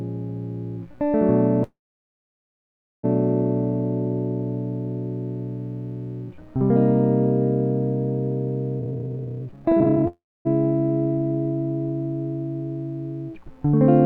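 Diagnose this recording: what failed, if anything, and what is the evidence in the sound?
Network stage, most likely, producing two call audio freezes. At 1.63 s the music stalls: the last sound carries on briefly as a fading smear, then goes silent for about 1.3 s before picking up at 3.05 s right where it left off. Nothing is lost, but roughly 1.4 s of filler has been inserted. The cause is likely packets held up in transit, emptying the jitter buffer. It happens again from 10.08 to 10.47 s, with about 375 ms inserted, mostly silence (around 260 ms).

Between 8.79 and 10.07 s there's a jitter buffer speed-up, which happens in the receiver's buffer stage. The music rushes along at about 192% of normal speed while the pitch stays put, so the tempo lurches forward instead of sounding chipmunked. The buffer was holding more audio than its target, so it trimmed many tiny pitch-period-sized slices back to back, cutting out around a second of material to bring the delay back down.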